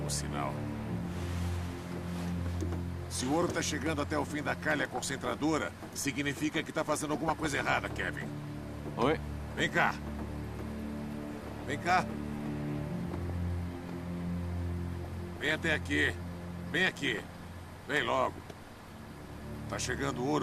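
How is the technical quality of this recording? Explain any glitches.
The recording is marred by six short bursts of DAB burbling, at 4.95 to 5.26 s, 7.28 to 8.02 s, 11.30 to 11.66 s, 13.12 to 13.30 s, 15.04 to 15.56 s and 17.04 to 17.40 s. Weak reception let bit errors, around half a percent, slip past error correction into the MP2 stream, so corrupted scale factors throw individual sub-bands up or down for up to a frame. The result is short blips of noise and sudden level jumps in single sub-bands laid over the sound.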